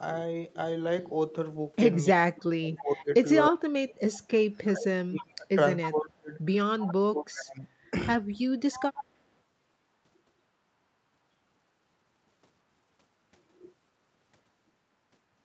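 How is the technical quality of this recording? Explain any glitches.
The recording has two recurring call-processing faults between about 2 and 9 seconds: stretches where the talker is pushed down, and faint delayed repeats of the voice. The sound is band-limited with nothing above 8 kHz, consistent with the Opus call path it passed through.

Speech suppressed in double talk occurs from 2.12 to 5.48 s, 5.89 to 6.33 s, and 6.85 to 7.66 s. The voice dips sharply, by about 30 dB at its deepest, affecting roughly three seconds of the first stretch. The likely cause is the far end talking at the same time. The echo canceller could not tell the local talker apart from loudspeaker echo, so it attenuated everything.

Echo leak appears at 2.78 to 3.04 s, 5.18 to 5.23 s, 6.79 to 6.85 s, and 8.71 to 9.04 s. A delayed copy of the voice follows the original by 311 ms, at about 20 dB below the speech in the first two instances and about 15 dB below in the last two. 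This is likely residual echo: a loudspeaker's output reached a microphone, the canceller failed to remove all of it, and the remainder was transmitted back.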